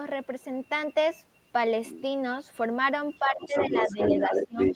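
From 3.2 s to the end, the echo canceller likely lost track during double talk: with both sides talking at once, it could not tell the talker apart from the loudspeaker echo, so it pulled the whole microphone signal down. The result is speech suppressed in double talk, with the talker's level sinking by roughly 15 dB at its deepest, the voice dipping, losing its high end or cutting out in pieces.

From 3.41 s to the end, the same canceller likely failed to subtract the far end's loudspeaker playback from the microphone, so the other side's voice is leaking through. It is no faint residue: the second voice arrives at about the same loudness as the talker, overlapping the suppressed speech.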